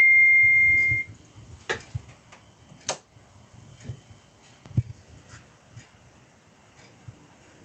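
From start to finish, the gain pumps, a swing of about 5 dB, with loud and soft parts pushed closer in level and the sound squashed. This gain pumping, with the top end stopping near 8 kHz from the call codec, likely comes from input gain set far too high, with a fast limiter repeatedly pulling it back down.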